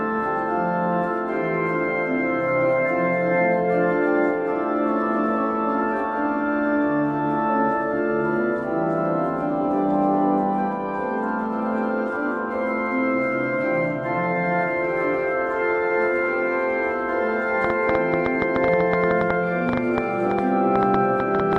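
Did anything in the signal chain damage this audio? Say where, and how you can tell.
Yes. A train of clicks from 17.6 to 21.6 s: about 30 irregular pops, near 7.7 per second, roughly 15 dB above the audio, likely from interference or a faulty connection or power supply.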